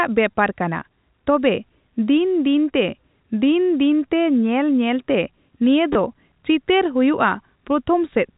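At 0.31 s and from 5.93 to 5.95 s, the speech has packet loss with last packet repeated. Each gap is 20 ms, which fits two lost 10 ms packets. The replayed audio gives a short robotic stutter.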